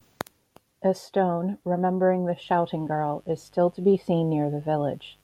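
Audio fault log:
2.40 s to the end at 5.23 s, mains buzz: a steady, raspy buzz appears under the speech and holds to the close, sitting roughly 40 dB below it. Its fundamental is 50 Hz, and its edge comes from sharp switching spikes, most likely leaking in from a dimmer, rectifier or unshielded cable. These spikes arrive twice per mains cycle and stack up harmonics of 50 Hz that climb into the kilohertz range.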